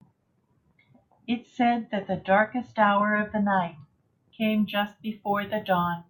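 From 4.42 s to the end at 6.09 s, the speech takes on a crude rate conversion fault. Samples were simply repeated to stretch the rate by 3:2, which fits a step from 32 kHz up to 48 kHz with no interpolation filter. The resulting error sits roughly 25 dB below the speech and sounds like a gritty, inharmonic fizz riding on the louder and brighter sounds. Unlike codec warble, it does not smear in time. Unlike clipping, it appears at moderate levels too.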